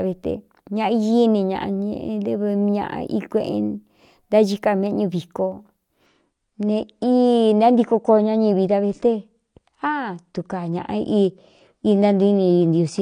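A speech recording that drops to a lower bitrate on an adaptive stream from 6.06 s to the end at 13.01 s. The change is abrupt and gapless. Content above 9.8 kHz disappears and coding artefacts thicken, which fits the player switching from about 96 kbit/s to about 32 kbit/s AAC when the connection slowed. Unlike a dropout, nothing goes missing. Unlike a fixed low-pass filter, the first half keeps its full treble.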